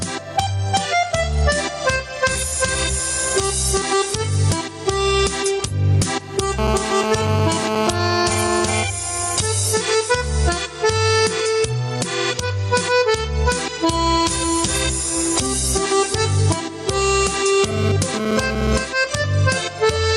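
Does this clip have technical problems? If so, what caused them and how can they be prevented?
Yes. Gain pumping runs throughout. The level ducks under loud sounds by around 10 dB, likely from excessive gain driving a fast limiter. Set the input gain lower and ease the limiter.

GSM phone buzz appears from 6.59 to 8.83 s and again from 17.64 to 18.84 s. It is a raspy 217 Hz buzz, about 5 dB below the signal. The audio circuit picks up a nearby 2G phone's radio bursts. Keep phones away from the recording chain.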